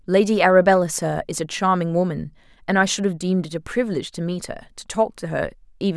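No technical faults are audible.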